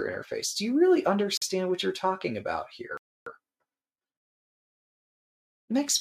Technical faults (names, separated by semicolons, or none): Bluetooth stall